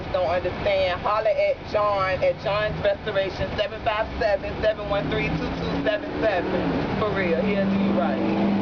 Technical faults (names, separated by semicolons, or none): none